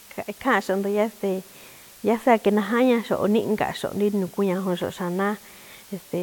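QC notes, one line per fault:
Throughout: low bit depth with dither. A steady, even hiss sits under the speech, roughly 25 dB below it, which fits a 7-bit signal. Dither before rounding turns the coarse quantisation error into constant white noise. The hiss never pumps, gates or distorts.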